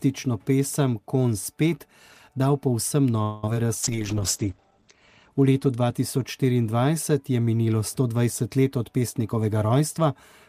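A call audio freeze at 3.22 to 3.44 s holds the sound for about 0.21 s: the last sound carries on as a fading buzz or hiss, then the audio resumes where it stopped. The likely cause is delayed packets draining the jitter buffer, which inserts a gap while losing nothing.

Short concealed packet loss follows at 3.46 s and again at 3.54 s. First 20 ms and then 10 ms failed to reach the decoder, and each time the receiver bridged the hole by extending the previous sound before blending back, giving a brief smear or wobble.

A call bitrate drop runs from 3.83 to 6.01 s. The encoder falls from 32 to 12 kbps, spending about 1.07 s at the lowest rate. Bandwidth narrows from 20 kHz to 8 kHz, so the sound turns coarser and duller until the bitrate climbs back.

A jitter buffer speed-up spans 8.96 to 10.06 s. To shrink an overfull buffer, the receiver repeatedly cut pitch-period-length slices, about a tenth of a second in total. 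The audio runs at 107% speed with unchanged pitch and sounds hurried.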